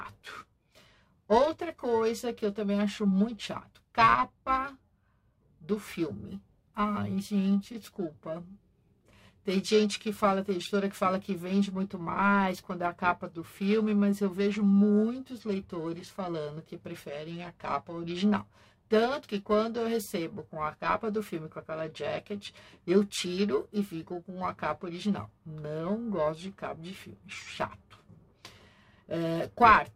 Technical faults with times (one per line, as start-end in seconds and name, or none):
0.00-29.95 periodic clock jitter